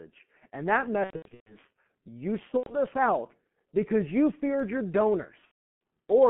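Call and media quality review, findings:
G.723.1 codec, whole clip: muffled, hoarse speech, smeared consonants. Band-limited to roughly 150 Hz–3.4 kHz at 6.3 kbit/s, heavy coding damage from 30 ms frames and a slowly updated voice model. Spectrogram: nothing above 3.4 kHz, blurred formant detail.

VoIP packet loss concealed by the speech codec, at 1.04–1.58 s, 2.58–2.76 s and 5.45–5.56 s: buzzy, stretched tone decaying to coloured noise, with weak or distorted speech after each gap. The decoder extrapolates from the last pitch and filter and lowers gain frame by frame. At 1.04–1.58 s about 330 ms was lost, scattered over 420 ms, with the longest gap 120 ms. At 2.58–2.76 s about 90 ms was lost, which fits three 30 ms frames. Spectrogram: flat, repeated harmonic bands fading out. Waveform: a tapering envelope.

Dropped samples, 4.60 s: single sharp click. The waveform jumps from one value to a later one, likely a couple of samples (a few hundredths of a millisecond) missing from the stream. 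Spectrogram: thin vertical line across the whole band. Waveform: a step discontinuity.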